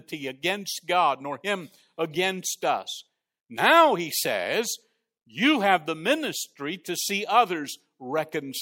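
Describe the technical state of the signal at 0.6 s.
At 0.6 s the speech signal is intact, with no technical fault audible at that point.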